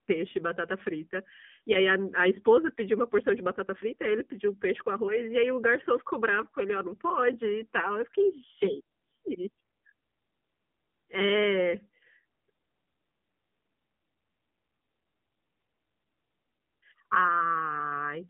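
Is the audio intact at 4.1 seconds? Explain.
No. At 4.1 seconds, as throughout, the speech has passed through the AMR narrowband mobile codec. It keeps only about 150 Hz to 3.5 kHz and rebuilds the voice from a vocal-tract model with sparse pulses, giving a buzzy, synthetic tone that fits a low 7.4 kbps mode.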